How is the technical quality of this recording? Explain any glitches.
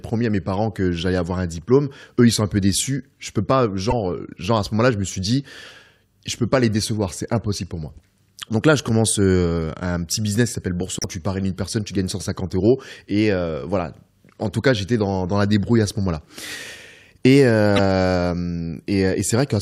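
The speech carries three brief glitches from damaged data in a compressed stream. They occur at 3.90 to 3.93 s, after "peux pas", at 10.99 to 11.06 s, after "business qui s'appelle", and at 17.76 to 17.80 s. Corrupted bytes upset the decoder, which loses frame sync and resyncs. Each one sounds like a short chirp or blip.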